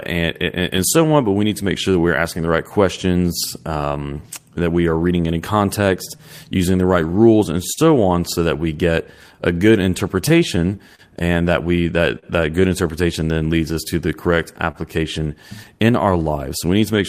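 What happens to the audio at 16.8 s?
Between 14.71 and 16.99 s, a few packets are lost or late, and each gap is patched by stretching the preceding speech, leaving brief ticks or smears: scattered short gaps. Throughout the clip, clock drift between sender and receiver has the sender running roughly 3 percent slow, so the draining buffer adds small timing hiccups.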